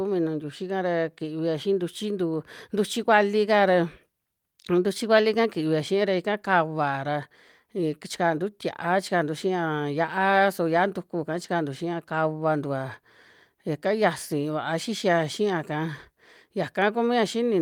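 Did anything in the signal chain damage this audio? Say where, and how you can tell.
No, nothing in the signal chain damaged this audio.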